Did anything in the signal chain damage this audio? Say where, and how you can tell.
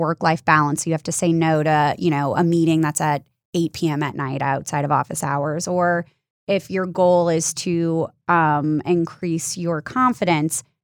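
Yes. From 1.55 s to 4.1 s, between "you have to say" and "night outside of office", the speech turns thin, bright and hissy, with sibilants spitting. The treble is raised by about 11 dB at 10 kHz relative to 1 kHz, a rising shelf that fits a 50 µs FM pre-emphasis curve. This is pre-emphasis left on: the transmission-side treble boost reached playback without the matching de-emphasis cut being applied.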